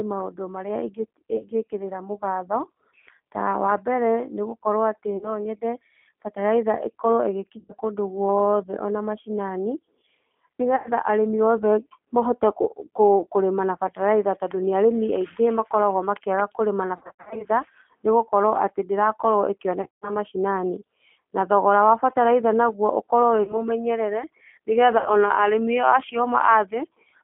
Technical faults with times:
0.00-27.23 G.729 codec
1.36-1.46 VoIP packet loss concealed by the speech codec
5.17-5.43 VoIP packet loss concealed by the speech codec
7.59-7.73 VoIP packet loss concealed by the speech codec
10.76-10.89 VoIP packet loss concealed by the speech codec
16.97-17.47 VoIP packet loss concealed by the speech codec
19.82-20.17 VoIP packet loss concealed by the speech codec
23.43-23.66 VoIP packet loss concealed by the speech codec
24.98-25.11 VoIP packet loss concealed by the speech codec

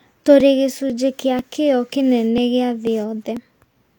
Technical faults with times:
0.40 audio missing between chunks
0.90 audio missing between chunks
1.39 audio missing between chunks
2.38 audio missing between chunks
2.87 audio missing between chunks
3.37 audio missing between chunks

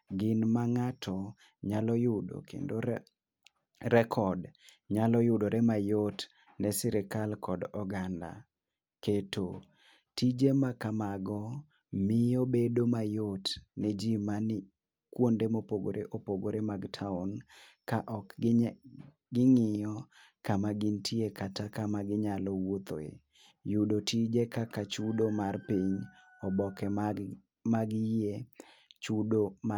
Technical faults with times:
none

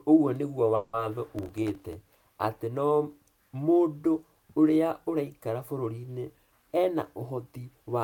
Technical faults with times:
0.75-0.95 call audio freeze
1.36-1.93 processor overload crackle
6.52-7.53 jitter buffer speed-up

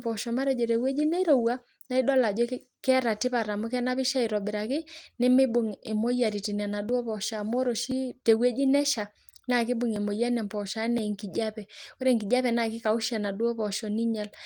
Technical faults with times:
5.87-12.01 periodic USB or driver dropouts

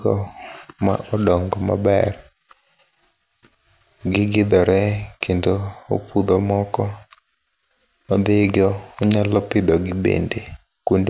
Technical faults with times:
none

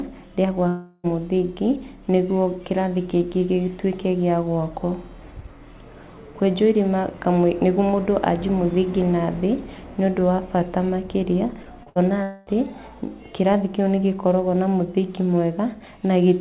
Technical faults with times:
0.68-1.07 long network dropout
11.63-11.89 short concealed packet loss
11.89-11.99 burst of packet loss
12.23-12.50 long network dropout

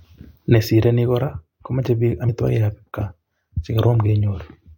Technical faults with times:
2.25-2.29 compressed frames skipped

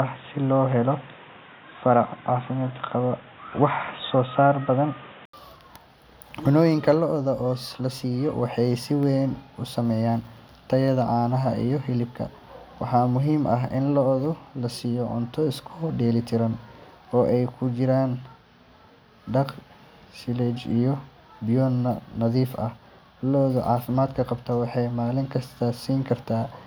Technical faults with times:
0.00-5.33 input switched to a poorer device

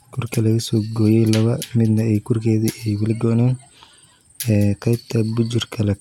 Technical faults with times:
none

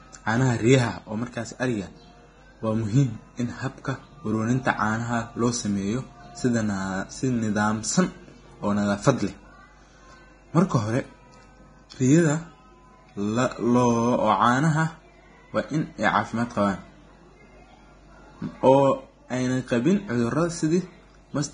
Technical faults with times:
0.00-21.53 Vorbis compression

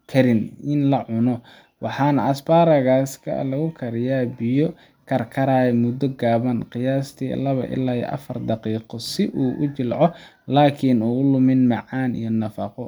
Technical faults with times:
none

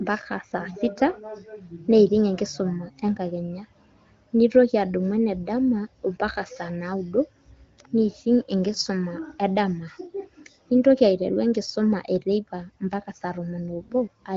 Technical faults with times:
none

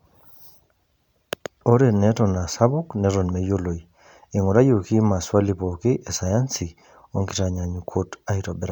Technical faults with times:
3.59 dropped samples
6.27 dropped samples

